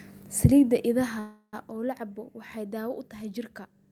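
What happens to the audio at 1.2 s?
At 1.19 s the speech stops and a call audio freeze begins, lasting until 1.55 s. The last sound is stretched into a fading buzz or hiss, and about 90 ms of that stretch falls to silence. The likely cause is delayed packets draining the jitter buffer, so the receiver filled about 335 ms on its own. Speech then resumes where it left off. Nothing is lost, but everything after arrives about 335 ms late.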